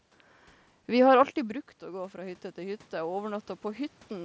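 Around 1.0 s the voice drops by about 14 dB, as if the talker leaned away from the mic at around the 1 s mark, and you can hear the automatic gain rising in response. From 1.12 s to 4.2 s the gain creeps up by about 8 dB, so the voice and the room noise swell back together. It never quite makes up the whole drop, so the level stays low, all within the 8 kHz top of the mSBC Bluetooth path.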